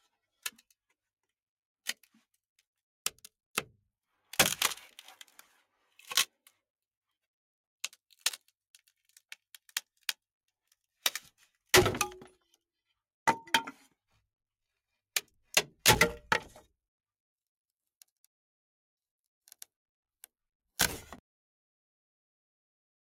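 The final buffers were never written out, producing a cut-off end at 21.19 s: the sound stops mid-event and drops straight to digital silence with no decay.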